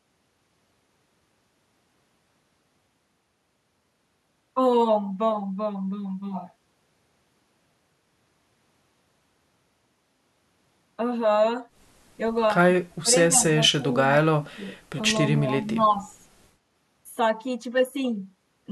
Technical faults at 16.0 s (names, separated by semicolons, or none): speech suppressed in double talk; echo leak